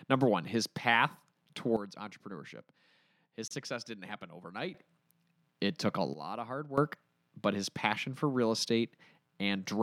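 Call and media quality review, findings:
Sudden gain jump, 1.77 to 4.74 s (down about 12 dB) and 6.14 to 6.78 s (down about 14 dB). Speech and noise floor drop and recover together, likely an unramped digital gain change.

Gap at a join of encoded pieces, 3.48 s: a 30 ms hole in the speech with smeared edges. Encoder start delay and padding left in, pieces look to be 6 s long.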